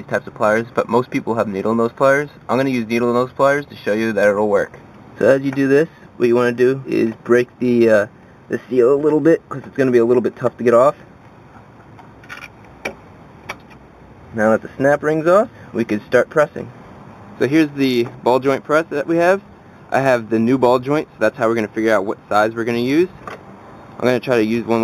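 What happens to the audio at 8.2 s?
At 8.2 s the audio carries imaging from linear upsampling, which runs through the whole clip. The sound was raised from 8 kHz to 48 kHz by joining samples with straight lines. That is a weak filter. The top of the original band is dulled. Mirror copies of the spectrum survive between 4 kHz and 8 kHz, roughly 30 dB below the signal. They add a light metallic shimmer to bright, high-pitched sound.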